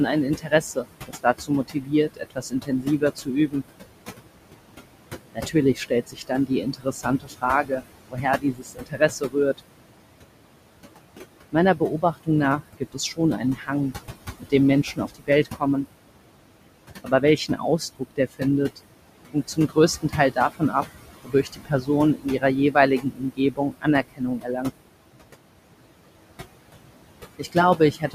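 A noise suppressor runs through the whole recording, pulling down every band it judges to be steady noise by about 21 dB. The room noise sits only about 11 dB under the speech, so the suppressor has to work hard. The background sinks in the gaps and surges back beneath each phrase.

The suppressor also mistakes parts of the speech for noise and turns them down with the background. This speech cut by the noise suppressor happens in eight stretches: 0.37 to 3.63 s, 5.35 to 9.6 s, 11.52 to 13.7 s, 14.4 to 15.86 s, 17.04 to 18.42 s, 19.33 to 20.74 s, 21.24 to 24.71 s, and 27.39 s to the end. The drops reach about 16 to 21 dB. Roughly one and a half to two seconds are lost in each of the first two stretches and in the one from 21.24 s, and a few hundred milliseconds in the others. Soft consonants and word endings sound swallowed or fade out.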